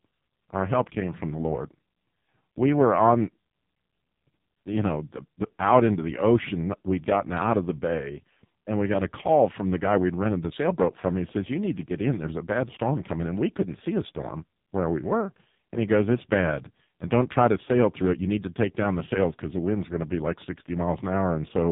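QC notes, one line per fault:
throughout, AMR narrowband mobile codec: nothing above 3.8 kHz survives, and the speech turns buzzy and synthetic. The voice is rebuilt from a vocal-tract model and sparse pulses, which points to a very low bitrate, around 5 kbps. Unlike a plain band-limit, the voice sounds resynthesised rather than just muffled.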